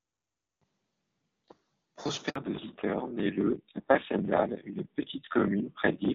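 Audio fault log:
2.30 s, handover gap: the speech cuts off within a few tens of milliseconds and a 60 ms stretch of silence follows, with nothing heard until 2.36 s. The call was being handed from one network to another, and no speech frames arrived while the switch happened. The decoder had nothing to play, so whatever was said in that window is lost and not smeared or repeated.
2.36 to 6.15 s, fallback to narrowband: straight after the gap the speech goes dull and muffled, with a rougher texture. The clearer HD Voice sound at the start comes from AMR-WB at around 23.85 kbit/s, where coding damage is faint or absent. After the switch the call runs on AMR-NB at about 7.4 kbit/s, so nothing above 4 kHz reaches the ear, and the low bitrate adds the grainy edge.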